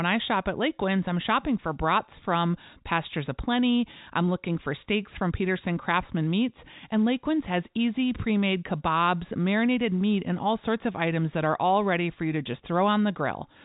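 Listening to this speech recording, nothing stood out as a technical problem, with the telephone-band G.711 coding leaving nothing above about 3.8 kHz.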